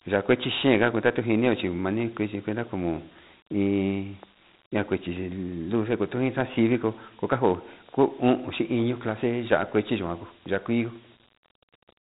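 From start to finish the speech carries Dialogic VOX ADPCM coding, and the damage is plainly audible. Nothing comes through above about 3.8 kHz, so it sounds boxed-in and phone-like, which fits an 8 kHz, 4-bit stream at roughly 32 kbps. Since each sample stores only a coarse 4-bit step from a running prediction, the encoder keeps lagging and overshooting, and you hear that as a gritty hiss riding along with the speech.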